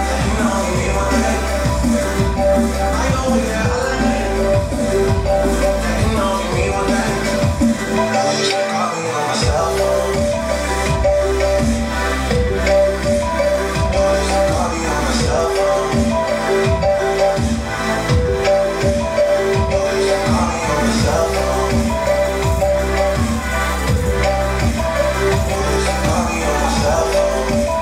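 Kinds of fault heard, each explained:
Nothing here stands out as a fault; the sound just carries on without a dropout, click or glitch anywhere along the way.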